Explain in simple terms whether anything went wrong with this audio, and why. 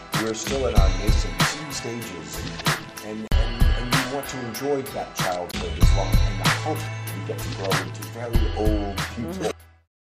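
Two blocks of digital silence cut in, at 3.28 s for 43 ms and at 5.52 s for 21 ms. The program likely ran late, leaving sudden holes.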